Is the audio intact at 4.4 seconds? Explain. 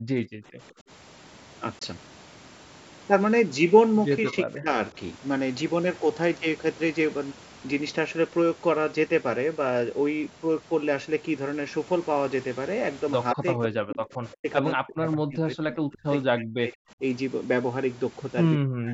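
No. From 4.25 to 4.77 s the speech is pulled down in level in uneven pieces, dipping by roughly 15 dB at its deepest and affecting about 300 ms of sound in total. This is likely speech suppressed in double talk: with both ends active, the call's echo canceller could not tell the near talker apart from loudspeaker echo and turned everything down.

Just before 4.4 s, from 4.28 to 4.36 s, a faint delayed copy of the voice comes through, trailing the original by 170 ms and sitting about 15 dB below it. The likely cause is an echo leak, where the far side's canceller failed to remove all of its loudspeaker sound from its microphone and sent that residue back.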